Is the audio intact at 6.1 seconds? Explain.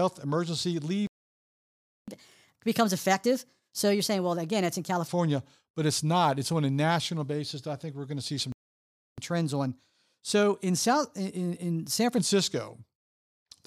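Yes, the audio is intact at 6.1 seconds: there is no dropout, click, distortion or other fault at that point.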